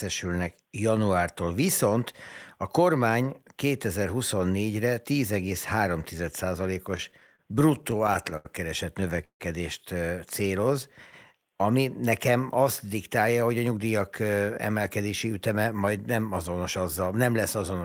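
From about 6.97 to 8.47 s the speech hits repeated stalls (stutter). Packets kept turning up late, the jitter buffer kept running dry, and the receiver stretched the last sound across 18 little gaps, none longer than 79 ms. It happens again from 9.01 to 9.42 s, with four gaps, the longest 155 ms, filling nearly half that stretch. Nothing's lost, but it drags and catches.

Then come two jitter buffer slow-downs, at 10.42–10.68 s and 11.33–11.63 s. The buffer was topping itself up by repeating single pitch periods, adding 37 ms and 55 ms. The speech runs at 89% and then 84% speed with the pitch unchanged, so sounds come out drawn out.

From 13.42 to 15.99 s there's a jitter buffer speed-up. The buffer was overfull, so short pitch-period chunks got trimmed, roughly a third of a second in total. Speech runs at about 109% and sounds a bit hurried.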